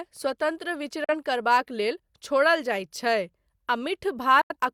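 At 1.04 s the speech cuts out in a digital broadcast dropout: the receiver stopped getting valid frames and muted, with a very fast fade of about 3 ms, until clean frames resumed at 1.15 s. The silence hides about 43 ms of lost audio, which fits a single lost frame. The same fault recurs from 4.41 to 4.55 s, losing about 85 ms, consistent with two frames. The speech that was sent during both gaps is simply missing.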